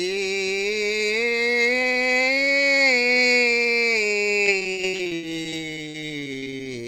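From 4.45 to 6.67 s the music turns choppy and robotic through repeated packet loss: 23 gaps, longest 78 ms, each concealed by extending the previous sound.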